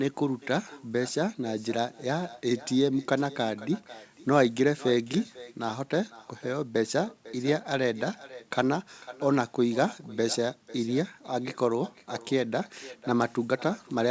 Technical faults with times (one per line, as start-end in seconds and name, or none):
0.00-14.10 echo with no canceller